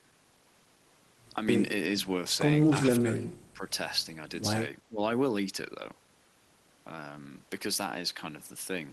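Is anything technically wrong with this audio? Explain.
Yes. Speech suppressed in double talk occurs at 2.99–3.17 s, 3.53–3.71 s and 4.89–5.01 s. The level dips about 15 dB in the first instance and about 10 dB in the others. The likely cause is an echo canceller that could not separate the local talker from the overlapping far-end echo and attenuated everything. These are partial gain dips rather than the abrupt full silences of packet loss, heard through a call path band-limited near 12 kHz.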